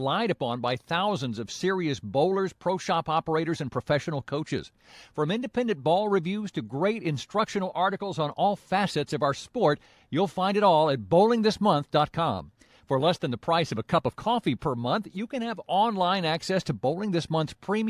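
Nothing in the recording trips the ear at any point, so there's no technical fault to point to here.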